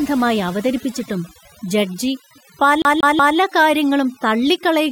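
From start to finish, overdone noise removal guts the background, which drops and breaks up into twinkling specks. A spectrogram shows patchy, isolated time-frequency blobs. From 2.82 to 3.38 s, the CD is stuck on one turn: the same 185 ms segment plays three times, each jump muted briefly, giving a fast, even stutter that appears as repeated identical waveform blocks.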